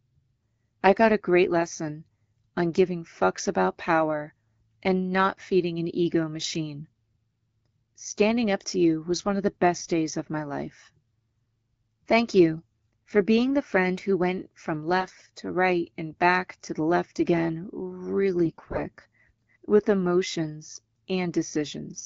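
AMR bit errors strike twice: from 14.98 to 15.22 s, between "friend who went from" and "to right and back", and more heavily from 18.46 to 18.83 s. Corrupted low-priority bits misplace the excitation pulses and skew the fine pitch, gain and spectral values. The speech keeps roughly its pitch and level but turns hoarse, scratchy and gargly, worst in the second burst.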